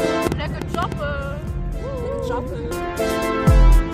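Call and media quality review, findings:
Train of clicks, 0.05–0.93 s. Likely interference from nearby equipment or a faulty connection or power supply, injecting repeated pulses into the path. Heard as about seven similar ticks at roughly 6.9 per second, unevenly spaced, each peaking around 15 dB above the surrounding sound, so they sit clearly on top of it. Stops after 0.93 s.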